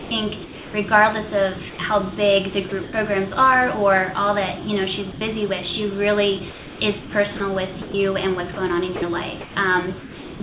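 From 0.00 to 0.74 s the sound stutters, with about 0.41 s of it replaced by synthetic hiss, likely sound chopped by the voice detector as it switched sending on and off. At 1.70 to 1.79 s it briefly gives way to steady noise, likely sound dropped by the voice detector after it mistook the sound for background. The choppiness returns at 2.69 to 2.93 s, likely the detector chopping again, and the same brief dropout recurs at 5.12 to 5.21 s, likely another detector drop. Longer choppy stretches follow at 6.5 to 7.94 s and 8.54 to 10.4 s, likely the same switching, with comfort noise filling roughly 0.57 s and 0.63 s of them against a call band that stops at 4 kHz.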